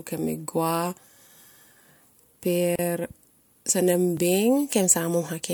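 A gap at a join of encoded pieces opens in this speech clip from 2.76 to 2.79 s, a silence of about 33 ms with smeared edges, after which the speech resumes exactly where it broke off. The audio was encoded as separate pieces and then joined without trimming, so the silent start-up delay of one encoder run and the padded final frame of the other both remain at the seam. A repeated buffer follows at 4.17 s. A fragment only 1.33 ms long plays once more with a hard join, which fits a 64-sample buffer. When fresh audio failed to reach the output device in time, it replayed its last buffer. Because the buffer is so small, the repeat comes across as a click or brief buzz rather than an audible stutter, and essentially no sound goes missing.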